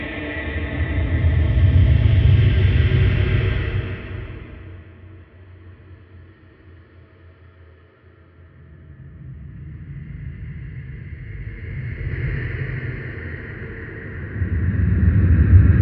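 The audio has zipper noise during two level moves. From 3.49 to 5.02 s the level falls by roughly 20 dB. From 11.21 to 12.38 s it rises by roughly 20 dB. Each move is made in small unsmoothed jumps, about a hundred a second, and each jump clicks, so a fine ticking rides on the sound while the level travels. At 12.11 s, inside the second move, there is damaged data in the compressed stream. The decoder misreads a corrupted stretch and resyncs on the next good frame. This is heard as a brief blip.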